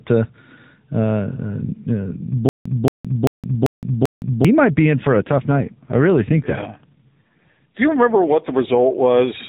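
From 2.49 to 4.45 s, a stall most likely forced repeated retries, producing a stutter with silent gaps: a 226 ms fragment replays five times, each followed by 165 ms of digital silence.

From 4.98 to 8.78 s, an AMR rate drop sets in on the narrowband mobile link. The speech turns rougher and buzzier with no gap, which fits a fall from 12.2 to 5.9 kbps.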